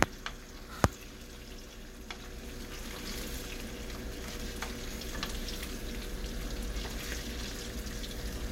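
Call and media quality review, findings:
No call or media quality findings in this clip; nothing to log for review.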